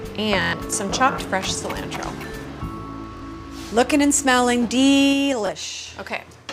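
From 0.42 to 0.53 s, Bluetooth stutter loses about 116 ms as a late link makes the receiver replay its last short buffer, a machine-gun buzz rather than silence; shorter stutters follow at 3.17 to 3.22 s and 5.47 to 5.49 s. Between 5.04 and 5.63 s, zipper noise ticks as the level drops by about 10 dB in 3 dB steps, roughly five a second, each a click rather than a smooth fade.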